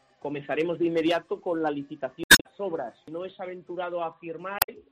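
Damaged data in a compressed stream garbles the audio from 2.21 to 2.46 s and from 4.59 to 4.69 s, as corrupted frames throw the decoder out of sync until it finds the next frame header.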